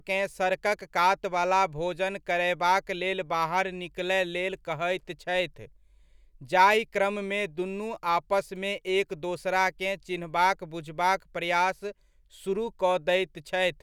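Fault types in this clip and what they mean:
No technical faults can be heard in this speech recording.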